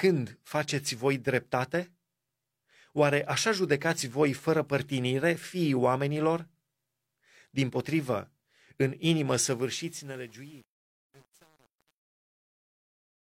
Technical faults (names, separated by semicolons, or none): truncation distortion on a fade